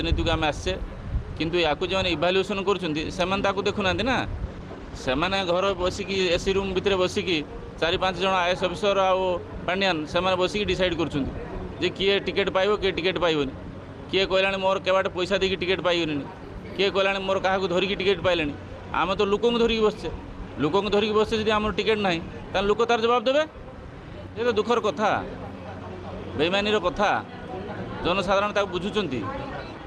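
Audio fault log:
4.45–8.62 s, call bitrate drop: the call's bandwidth estimate fell and the encoder was pushed to spend far fewer bits, consistent with a fall from about 48 kbps to roughly 16 kbps. At the low point, held for about 1.6 s, the codec quantises the sound more coarsely and trims the upper frequencies, so the audio turns muffled and rough and watery before clarity returns as the bitrate climbs back.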